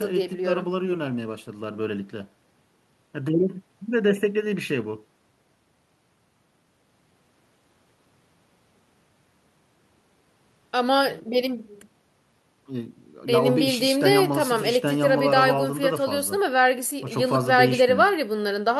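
No technical faults are audible.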